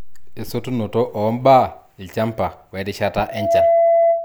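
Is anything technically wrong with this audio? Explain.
Yes. After "ilchamba we rishata", loudspeaker feedback squeal runs from 3.20 s to 4.25 s. Mic-to-speaker loop gain exceeds one at 672 Hz, so a tone swells over roughly a third of a second to about 5 dB above the speech. On a spectrogram it is a bright horizontal line, and on the waveform the amplitude rises steadily.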